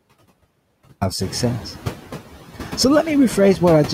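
Noise suppressor artifacts run through the whole speech clip. The suppressor estimates the steady background in each frequency band and pulls those bands down, frame by frame, by about 12 dB. The floor therefore sinks in the gaps between words and comes back up underneath them, so the background pumps with the speech. The room noise, which is part of the recording, steps up by about 13 dB roughly a second in. That makes the pumping easier to hear, even with the noise sitting about 14 dB below the speech.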